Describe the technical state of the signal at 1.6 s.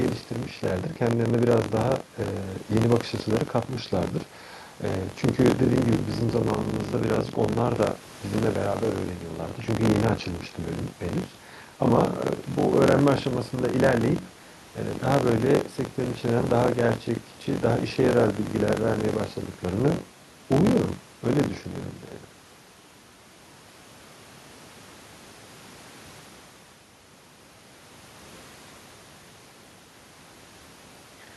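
At 1.6 s the speech carries buffer tearing, present throughout the clip: writer and reader cross inside each period, splicing in about a fifth of audio some 40 ms stale. It buzzes at 46.9 Hz, fitting a 1024-sample buffer, and shows as evenly spaced waveform discontinuities and vertical spectrogram striations.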